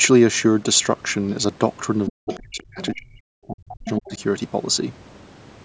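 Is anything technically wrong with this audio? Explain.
Yes, there are two related problems, both packed into the middle of the clip, from about 2.1 s to 4.2 s.

First, speech suppressed in double talk, from 2.09 to 3.21 s and again from 3.47 to 4.20 s. The talker's level drops out in pieces, by roughly 40 dB at its worst in the first stretch and around 35 dB in the second, adding up to about a second and half a second of damage. This is likely an echo canceller that heard both ends talking at once, couldn't separate the talker from its own loudspeaker echo, and clamped everything down.

Second, the other side's voice leaking through, in the same windows. Short scraps of a second voice show up at 2.33 to 2.42 s, 2.58 to 2.63 s, and 2.80 to 2.95 s, then a longer run from 3.85 to 4.17 s. They sit roughly 15 dB below the talker at their loudest, and one is barely there at about 30 dB down. 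They likely come through because the canceller only partly removed the far-end audio playing on the device's speaker. The band-limiting to 8 kHz is just the call's microphone processing.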